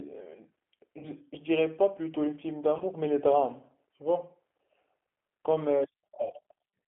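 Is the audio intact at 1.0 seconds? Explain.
No. Around 1.0 seconds the speech breaks up from about 0.99 to 1.08 s. This is VoIP packet loss concealed by the speech codec. About 40 ms of audio went missing, which fits two lost 20 ms packets. The decoder filled the gap by repeating its last pitch and vocal tract filter at falling gain. The result is a short buzzy tone or coloured noise that fades. Because each frame builds on the previous one, the voice stays weak or distorted for tens of milliseconds or more after about 1.08 s.

The same moment also carries the G.729 codec damage that runs through the whole clip. The speech is rebuilt at 8 kbit/s from a filter, a pitch predictor and a few pulses per frame. The band is held to about 200 Hz to 3.4 kHz, so it sounds thin. The codec roughness is plainly audible, giving a slightly grainy, synthetic edge.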